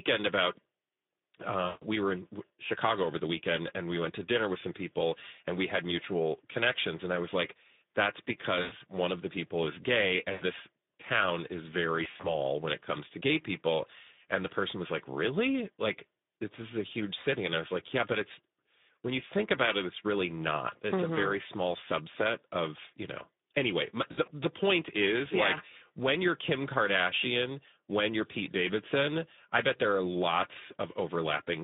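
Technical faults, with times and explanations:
throughout Speex codec: the sound is confined to roughly 200 Hz to 3.7 kHz, as on a narrowband line, and has a plainly audible hoarse, noisy graininess. That fits Speex at around 11 kbps, where too few bits remain to code the excitation cleanly.
1.65 to 1.85 s, 8.61 to 8.74 s, 10.31 to 10.43 s, 12.03 to 12.32 s, 24.11 to 24.31 s VoIP packet loss concealed by the speech codec: between 80 and 160 ms of audio is missing in each event. The third comes after "the people is gay". The last two are gaps scattered over 200 and 160 ms, after "this town is very" and "of you know anyway". The decoder repeats its last pitch and filter with falling gain, so the sound smears into a fading buzzy tone or coloured noise and stays weak briefly after packets return.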